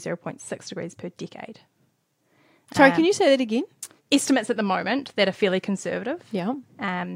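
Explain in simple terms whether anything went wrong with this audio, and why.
Nothing went wrong with this speech audio, because no technical fault can be heard anywhere in it.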